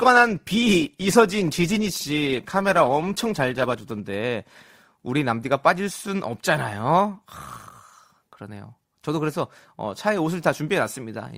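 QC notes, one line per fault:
0.0–4.0 s, adaptive stream starting at a low bitrate: the speech sounds dull and smeared, with thin or synthetic treble and strong codec artefacts, then abruptly clears without a gap. The player opened on a low-bitrate rendition, consistent with roughly 16 kbit/s Opus, before stepping up to one nearer 64 kbit/s.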